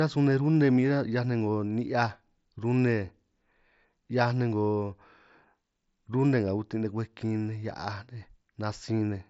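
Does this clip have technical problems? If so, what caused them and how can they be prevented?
No, nothing here needs fixing: it's speech carried over a Bluetooth headset link using the mSBC codec, which is working as it should, so there's no fault to trace or prevent.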